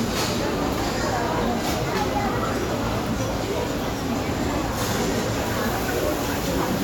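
A recording of sounds, marked by two brief blips of damaged data in a compressed stream, at 1.93 s and 4.62 s. Each is a short, unnatural glitch cutting across the audio. The cause is corrupted bytes inside the encoded file. At those points the decoder hits frames it cannot read correctly. It loses its place in the stream and must hunt for the next valid frame header before decoding resumes.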